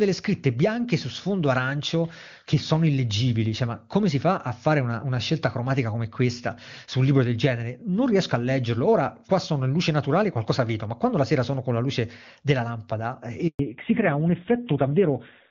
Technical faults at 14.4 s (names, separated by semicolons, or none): fallback to narrowband